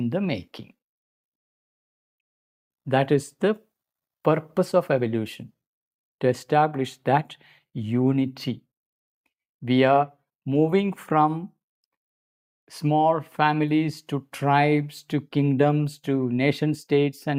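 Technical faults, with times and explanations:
No technical faults can be heard anywhere in this audio; the signal stays steady and intact throughout.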